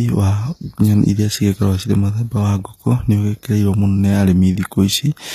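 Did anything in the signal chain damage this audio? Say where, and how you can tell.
Yes. The damage is at the codec stage, likely HE-AAC compression throughout the speech, at a bitrate that sounds close to 24 kbps. Sibilants turn gritty and metallic, and the treble sounds copied rather than real. A spectrogram shows nothing above 14.9 kHz and repeated, smeared upper bands that fail to align with the lower harmonics.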